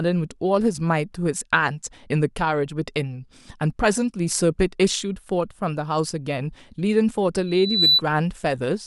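Speech clip with a loudspeaker feedback squeal near the end, from 7.46 to 8.02 s. A single tone at 4 kHz swells up over roughly 0.4 s and ends up sitting about 5 dB above the speech. That's the mic catching the loudspeaker it's feeding, with the loop gain creeping past one at that frequency, so the tone keeps feeding itself and growing until the amplifier limits it or the loop gets broken.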